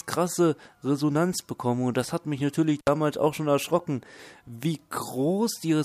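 At 2.79 s the sound drops out briefly. This is an intermittent contact. A loose cable or plug opens the circuit for about 64 ms, ending by 2.88 s. Crackle marks both edges of the gap. Faint hiss remains while the line is open.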